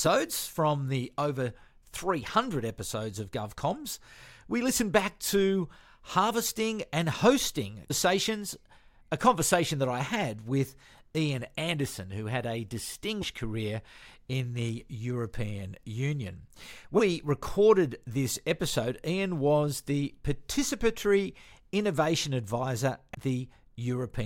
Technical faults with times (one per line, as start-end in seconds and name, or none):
7.90 damaged data in a compressed stream
13.21 damaged data in a compressed stream
16.98-17.00 damaged data in a compressed stream
23.13 damaged data in a compressed stream